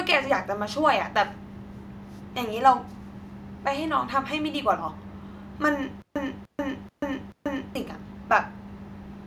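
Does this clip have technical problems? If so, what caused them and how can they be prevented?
Yes. From 6.02 to 7.75 s, a stutter with silent gaps repeats a 297 ms speech fragment four times, each copy followed by 137 ms of flat digital silence. A stalled stream likely replayed its last buffer on each retry, so the speech meant for that stretch is lost. A spectrogram shows identical blocks separated by blank vertical bands, and the waveform drops to a flat line between them. Deeper buffering and a player that conceals underruns instead of replaying stale audio would prevent it.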